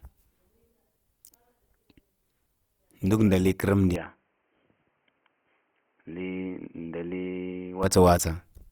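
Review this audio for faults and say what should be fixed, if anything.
The whole clip has a grainy, rough edge on the speech, even though the band stays wide, reaching up to about 20.4 kHz. That points to Opus compression in its music mode, likely at around 24 kbps, where starved bands get filled with noise instead of detail. Encode at a higher bitrate or use the speech mode to avoid it.

From 3.96 to 7.83 s the sound suddenly goes dull, with nothing above 3.2 kHz, drops a few decibels in level, and picks up a faint new noise floor. There's no gap at either edge. That's likely the input switched to a poorer device. Lock the input device before recording so the system can't swap it mid-take.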